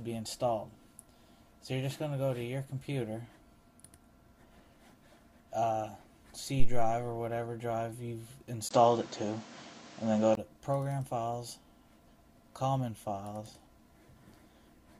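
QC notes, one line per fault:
6.60 to 6.98 s, phantom power thump: A supply switched on or off on a live input, and that voltage step drove through the coupling capacitors as a sudden low-frequency surge. It lands as a deep thump that dies away in about 86 ms.
8.69 to 10.37 s, input switched to a poorer device: The recording likely jumped to a lesser microphone or headset profile. After a 20 ms gap the sound turns dull, with nothing above 8.2 kHz, shifts in level by roughly 5 dB, and carries new background noise around 30 dB down.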